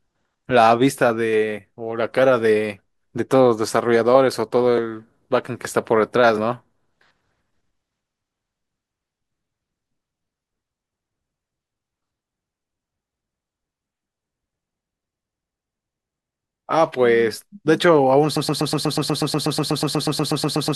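From 18.36 s to the end, the speech gets stuck in a broken-record loop: a fragment of about 122 ms repeats back to back, 20 times in a row, like a stutter that never resolves. It's exact repetition, so it sounds mechanical, cycling at roughly eight times a second. The likely cause is a player or stream stalling and re-sending the last chunk it held, so whatever should have followed is simply gone.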